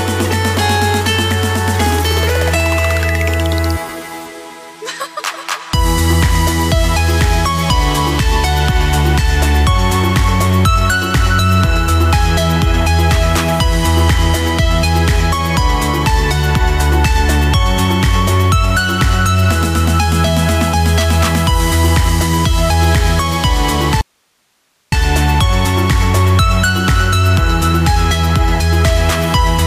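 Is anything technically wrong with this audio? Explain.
Yes, there's an audio dropout to a faint residue from 24.01 to 24.92 s, so a bit over 0.9 s of the sound just vanishes. It cuts out and comes back abruptly mid-flow, nothing like a natural pause or fade, and the gap holds only hiss sitting roughly 50 dB below the normal level. That points to the signal likely being lost upstream for a moment while the rest of the chain stayed live and kept passing its own noise.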